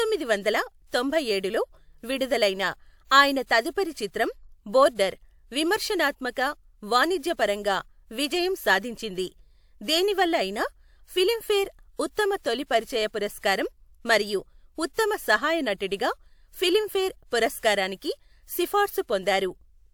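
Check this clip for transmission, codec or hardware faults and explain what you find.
Two codec faults turn up, both pre-echo. At 0.88 s and again at 13.39 s, a short hiss leads a sharp speech onset by about 46 and 49 ms. The transform block spreads its quantisation noise, sized for the loud attack, into the quiet gap before it, softening the onset. On a spectrogram this shows as a thin broadband smear just ahead of the attack, and on the waveform as low-level fuzz before the transient.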